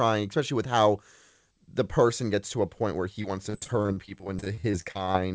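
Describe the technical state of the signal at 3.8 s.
At 3.8 s the stream is in a run of repeated packet loss (robotic sound), from 3.22 to 5.17 s, right after "a point where he". Packets kept going missing, and each gap of up to 42 ms was patched by extending the last sound. This makes the speech choppy and robotic, with about a fifth of the stretch filled in.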